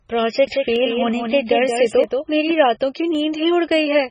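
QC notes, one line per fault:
Throughout, MP3 compression: the speech sounds watery and swirly, with the treble cut, likely from very low-bitrate encoding. Unlike a plain low-pass filter, it also smears attacks.
0.47–2.51 s, doubled audio track: a full-band copy of the speech trails about a fifth of a second behind, a few dB quieter. It likely comes from a second capture path. Unlike reverb, it has no decay and starts and stops abruptly.
0.76 s, 2.04 s, 3.15 s, dropped samples: each is a single sharp click where the waveform jumps, likely a fraction of a millisecond of lost samples. Unlike a dropout, no sound goes missing.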